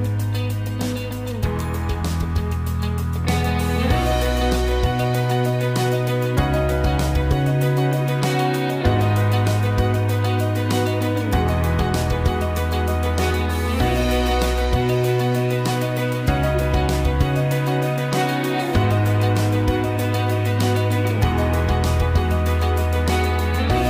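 No technical faults can be heard anywhere in the audio. Nothing in the recording points to a problem in how it was captured, processed or delivered.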